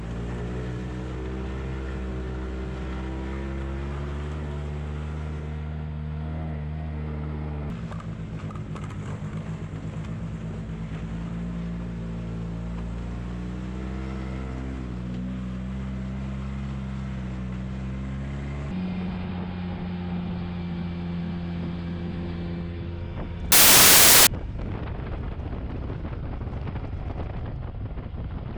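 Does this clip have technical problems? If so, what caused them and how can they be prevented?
Yes: from 23.52 to 24.27 s the reader assembles samples from the wrong bytes, misaligned or swapped, so low bits dominate and the audio becomes loud, harsh broadband noise. Prevent it by declaring and checking byte order and sample alignment at every read boundary.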